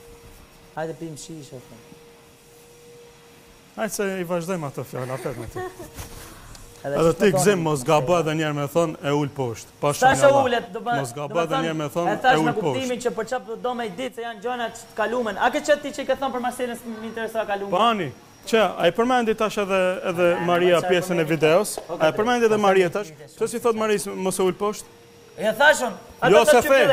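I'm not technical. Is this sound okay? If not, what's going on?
No. Two brief squeaky blips occur, at 10.12 to 10.14 s and 17.77 to 17.79 s. This is a corrupt frame decoded: a few damaged chunks of compressed data were played anyway.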